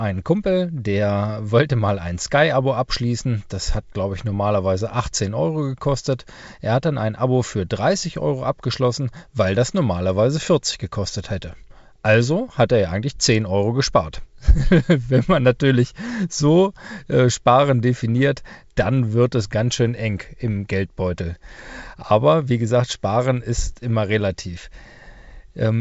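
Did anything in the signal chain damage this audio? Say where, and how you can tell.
No, the speech sits in a wideband telephone band with nothing above about 7.7 kHz, consistent with G.722 coding at what sounds like its full 64 kbit/s rate, and the codec has left at most a faint trace.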